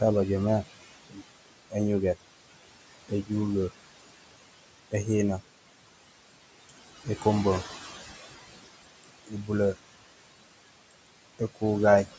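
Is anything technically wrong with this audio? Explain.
Yes. There are noise suppressor artifacts throughout. The suppressor estimates the steady room noise, which sits about 12 dB below the speech, and pulls those bands down by about 21 dB frame by frame. The background sinks in pauses and rises under speech.

There is also speech cut by the noise suppressor at 1.09 to 1.22 s, 3.09 to 3.31 s and 9.25 to 9.5 s. Each time the suppressor mistook quiet speech for noise and turned it down with the background, by about 19, 15 and 21 dB. Those moments sound swallowed or faint for a fraction of a second.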